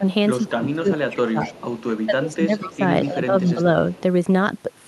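In this speech clip the voice repeatedly sinks in three stretches, from 0.54 to 1.57 s, 2.06 to 2.82 s and 3.05 to 3.59 s, with the deepest dip about 20 dB in the first and shallower ones of about 15 dB and 10 dB after. This is speech suppressed in double talk, likely from an echo canceller that, with both ends talking at once, could not tell the local talker from loudspeaker echo and pulled the whole signal down. A faint, delayed copy of the voice also trails behind the original at 1.42 to 2.03 s, 2.66 to 2.77 s and 3.91 to 4.01 s, lagging by 218 ms and sitting about 15 to 30 dB below the speech. This is echo leak, most probably from a far end on a loudspeaker whose canceller let part of the microphone pickup back into the call. The audio is band-limited to about 12 kHz, which fits the Opus call path it travelled through.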